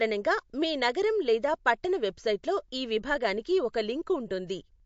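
From start to finish the speech sounds watery and swirly, with metallic chirps on s sounds and nothing above about 7.6 kHz. This is likely MP3 compression: starved of bits, consistent with roughly 48 kbps, the encoder cuts the treble and drops weak frequency lines.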